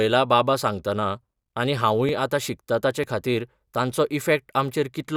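A dropped buffer (overrun) is the likely cause of the two brief skips in this speech recording, at 2.09 s and 3.04 s. At each point a few milliseconds of audio, roughly 5 ms, is simply missing, and the material on either side is butted together with no gap. That splice produces a slight jump forward in the sound, consistent with the capture side failing to read its samples before the hardware wrote over them.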